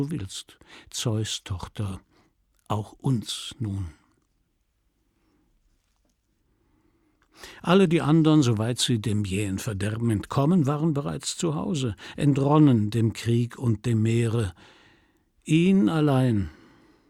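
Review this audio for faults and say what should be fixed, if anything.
Nothing here needs fixing, since there are no faults to point to and the audio can be left as it is.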